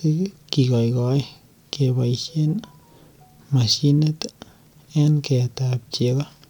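No technical faults are audible.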